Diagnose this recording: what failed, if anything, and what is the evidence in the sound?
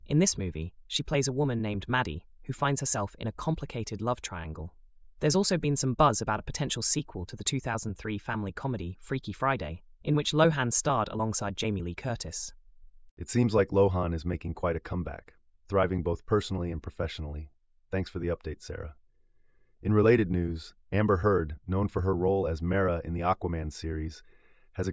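Nothing failed in this recording, and the sound gives no evidence of a fault at any stage.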